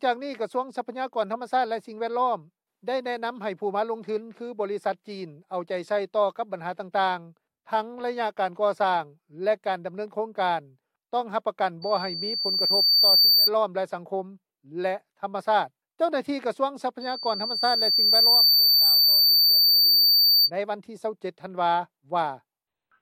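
At 11.82 s a loudspeaker feedback squeal sets in: a steady 4.6 kHz tone that swells over roughly a second and a half until it sits well above the programme, around 10 dB louder, before breaking off at 13.50 s. The same 4.6 kHz squeal returns from 17.01 s to 20.50 s. The microphone is picking up its own loudspeaker, and at that frequency the loop gain exceeds unity, so the tone feeds on itself.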